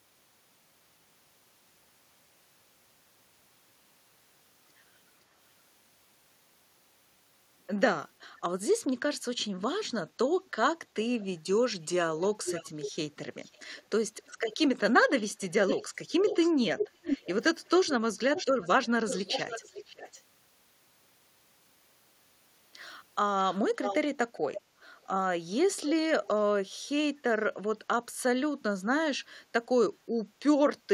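A speech clip where an echo canceller at a loudspeaker end likely let its microphone pickup through, producing echo leak: a delayed copy of the speech, lagging about 0.53 s and drifting to 0.58 s, at 11.19–11.25, 12.2–14.57, 15.3–20.22, 23.52–23.98, 24.54–25.05 and 25.86–26.39 s. It ranges from faint to nearly as loud as the speech.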